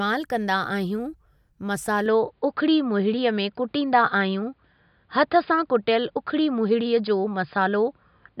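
Speech that turns dull and boxy at 2.06 s and stays that way to the end, with nothing above 5 kHz, a level jump of about 5 dB, a faint new noise floor around 50 dB down, and no gap at the change. That's likely the input switched to a poorer device.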